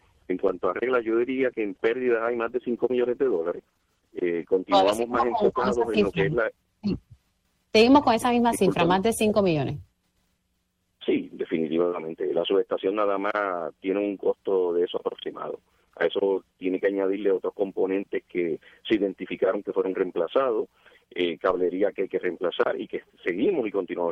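From 0.48 s to 7.71 s a call bitrate drop cuts the encoder from 48 to 13 kbps, bottoming out for about 5.4 s. The sound turns rough, watery and dull as highs are trimmed. Unlike packet loss, there are no gaps, only steady degradation until recovery.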